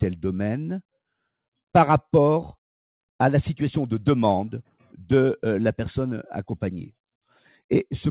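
Nothing stood out on listening, with the sound reaching the ear through the G.711 mu-law call path at its usual telephone bandwidth and nothing above 4 kHz.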